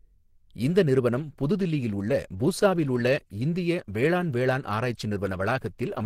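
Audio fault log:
1.09 s to end: adaptive stream at a lower bitrate. The speech switches abruptly to a rougher version with no gap in between, and it stays that way for the rest of the clip. Codec artefacts rise audibly, even though some content still reaches about 20.4 kHz. The sound points to the player dropping to a lower-quality stream when the connection slowed, which fits Opus falling from roughly 64 kbit/s to 16 kbit/s.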